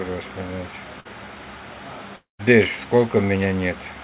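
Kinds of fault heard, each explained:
Burst of packet loss: At 1.00 to 1.09 s a short run of audio never arrived in time, so the receiver stretched the preceding sound for about 48 ms, fading it, before playback resumed with roughly 40 ms of the original missing. On a spectrogram the harmonic or noise pattern freezes and smears into a short horizontal band that dims. The waveform shows a repeating, shrinking cycle and then a jump to new material.
Long network dropout: From 2.16 to 2.42 s the sound likely stopped arriving for about a quarter of a second. The last sound is carried on as a decaying buzz or hiss for a while, then around 140 ms of near silence follows before audio returns with about 240 ms gone. A spectrogram shows a smeared, fading band, then an empty gap below the 4 kHz ceiling of the telephone-band channel. The waveform tapers into a flat line.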